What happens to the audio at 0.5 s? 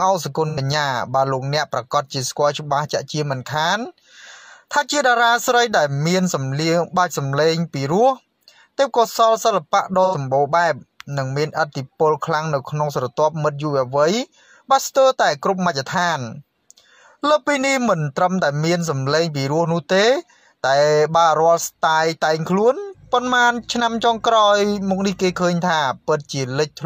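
AAC frame loss with concealment hits from 0.48 to 0.58 s. Roughly 85 ms of coded audio goes missing, which fits two lost frames. The decoder patches the gap from the last good spectrum. The result is a brief smeared, noisy or phasey patch.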